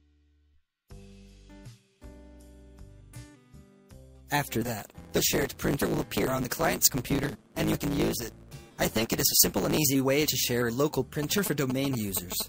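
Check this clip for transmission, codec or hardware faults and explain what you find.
Two faults are audible.

From 4.61 to 9.78 s there is a block size mismatch with truncation. One stage writes longer blocks than the next reads, which fits a 512-sample block, and each block's tail is discarded. This produces a 109 Hz buzz. The sound runs 1.16 times fast at roughly normal pitch.

From 11.23 to 12.42 s, GSM signalling bursts appear. A nearby 2G phone is sending brief radio bursts while signalling, and the audio circuitry rectifies them. The result is a galloping dit-dit-dit of short 217 Hz buzzes, only a little quieter than the main sound.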